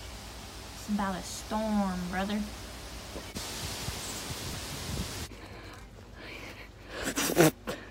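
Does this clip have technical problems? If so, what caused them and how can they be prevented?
Yes. Mains hum runs through the whole clip as a steady low tone at 50 Hz, sitting roughly 20 dB below the sound. It comes from a ground loop or a nearby transformer letting the power-line frequency leak into the signal path. Unlike rumble or handling noise, which wander and spread across low frequencies, this stays at one fixed pitch and level. To prevent it, break ground loops with balanced cabling or isolation and keep cables away from power supplies.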